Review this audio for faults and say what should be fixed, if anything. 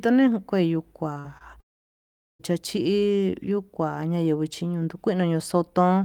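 Short concealed packet loss: packets missing for about 20, 40 and 20 ms were patched by the decoder, causing brief smears at 1.13–1.17, 1.19–1.26 and 1.38–1.42 s.

Long network dropout: from 1.60 to 2.41 s the sound cuts to near silence for about 0.8 s, likely because the stream stopped arriving, then resumes.

To prevent this, give the call a larger jitter buffer plus forward error correction, and stabilise the network link to avoid extended outages.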